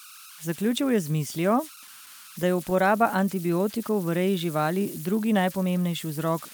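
Throughout the speech, converter idle tones sit underneath: an undithered delta-sigma converter settles into repeating bit patterns on small signals, leaving a whistle near 1.5 kHz, about 19 dB below the signal. A spectrogram shows a thin horizontal line, clearest in pauses.

From 1.55 to 2.77 s, just after "je z mislijo", come scattered short gaps: about seven lost packets, each patched by extending the preceding sound, none longer than about 10 ms. They're heard as brief ticks and hiccups; the waveform shows small repeated slivers, and timing drifts roughly 25 ms late.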